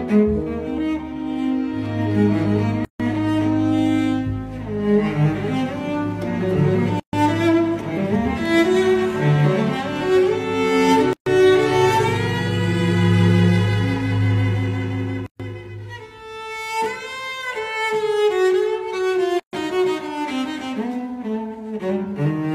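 At 2.85 s the sound drops out for about 148 ms, then resumes where it stopped. The same gap at a join of encoded pieces recurs every 4 s, at 7.00, 11.13, 15.26 and 19.40 s, each about 133 ms long. The audio was encoded in separate segments and joined untrimmed, so each segment's encoder start-up delay and final-frame padding remain as silence in otherwise continuous sound, with codec-smeared edges around each break.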